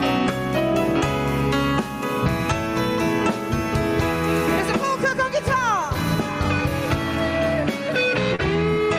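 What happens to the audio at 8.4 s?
Around 8.4 s there is a short concealed packet loss, from 8.35 to 8.42 s. About 40 ms of audio never arrived in time, and the receiver invented roughly 31 ms to cover the hole. It extended the preceding sound, either from its pitch or as shaped noise, then crossfaded back into the real signal. It is heard as a brief smear or wobble. On a spectrogram the patch appears as a smoothed, repeated or blurred stretch with a soft seam at the rejoin.

The same moment also carries gain pumping, which runs through the whole clip. The level swings by around 15 dB, leaving loud and soft passages squashed together. The likely cause is gain set far too high, with a fast limiter or compressor pulling it back on every loud sound. The waveform's envelope looks flattened.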